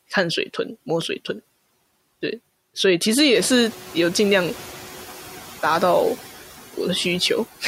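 Noise suppressor artifacts run throughout the speech: the suppressor cuts bands it judges to be steady noise by about 10 dB, so the residue dips between phrases.

Noise suppressor catching up, from 3.34 to 4.78 s: the room noise jumps by about 18 dB around three and a half seconds, and the lagging noise estimate cuts only about 5 dB until it adapts over 1.44 s.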